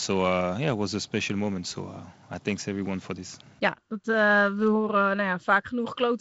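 Nothing stood out on listening to this speech, which comes across as ordinary G.722 wideband telephone audio with content reaching up to about 7.7 kHz.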